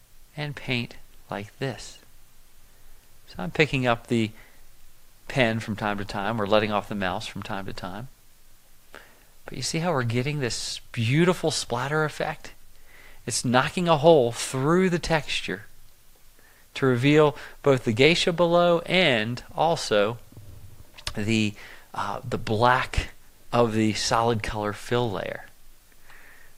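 No technical faults can be heard anywhere in the clip.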